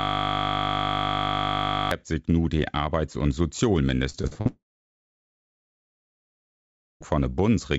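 A system hang loop is already under way when the clip opens and runs to 1.91 s. The machine stalled while the audio hardware kept replaying one 20 ms slice of its buffer, about 95 times over. The result is a steady buzz at 50 Hz.

Repeated packet loss, with its robotic sound, runs from 4.10 to 4.47 s. Five short gaps, the longest 42 ms, were each patched by stretching the preceding sound. That concealment fills about two fifths of the span, so the audio turns choppy, with pieces missing.

A long network dropout follows from 4.47 to 7.03 s, likely caused by audio not arriving at all. The last sound is carried on briefly and fades. About 2.4 s of silence follows before the audio returns, minus everything lost. Throughout, the G.722 call path leaves nothing above 8 kHz.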